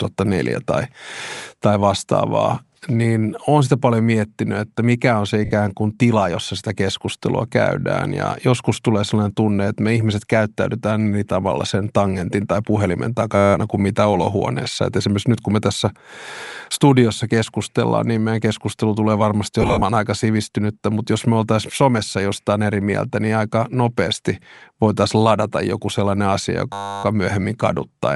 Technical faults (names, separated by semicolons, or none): Bluetooth LC3 compression; lost LE Audio frames; system hang loop